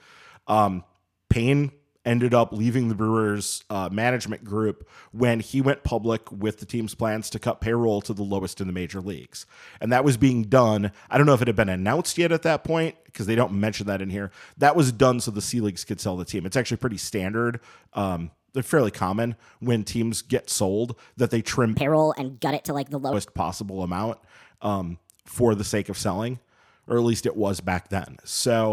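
From 21.74 to 23.13 s there's a wrong sample rate fault. The speech suddenly runs 1.38 times fast and about 5.5 semitones higher, so it sounds squeaky and rushed. That fits 32 kHz audio being played at 44.1 kHz with no conversion.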